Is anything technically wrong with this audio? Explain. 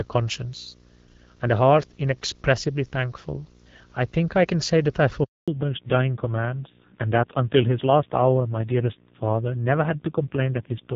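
Yes. A steady 60 Hz buzz with a fizzy hash riding above it runs under the speech for the whole clip, sitting roughly 30 dB below the voice. This is video or display buzz: a screen or video cable is coupling interference into the audio path at the picture's field rate.

At 5.24 s the speech fades out within a few tens of milliseconds and stays silent until 5.48 s, a 240 ms hole. This is a handover gap: the call was being switched between networks, no speech frames arrived during the changeover, and whatever was said in that span is gone.

From 5.48 s to the end, the voice turns duller and rougher, with nothing left above 4 kHz. This is a fallback to narrowband: the call dropped from the light, clear wideband HD Voice coding of the first half to an older narrowband codec. The roughness fits a low rate of about 5.9 kbit/s.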